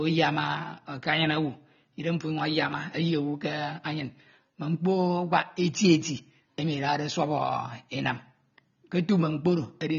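Likely AAC compression throughout: everything above 6.9 kHz is gone and coarse quantisation leaves the speech dull, smeared and warbling, which fits a bitrate near 24 kbps.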